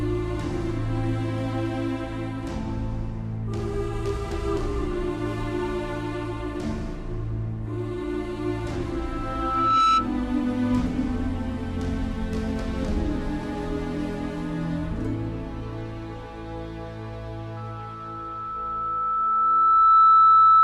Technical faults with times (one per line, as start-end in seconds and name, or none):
8.98-10.10 loudspeaker feedback squeal
17.56-20.64 loudspeaker feedback squeal